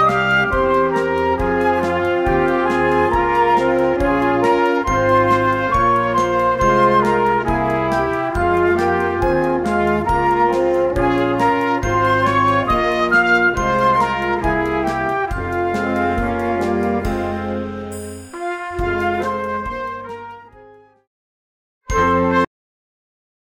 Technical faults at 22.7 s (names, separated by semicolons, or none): cut-off end